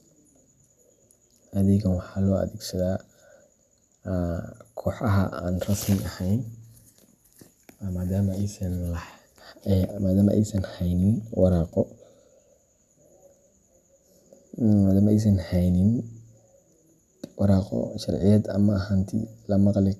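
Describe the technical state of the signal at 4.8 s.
At 4.8 s the speech signal is intact, with no audible technical fault at that moment.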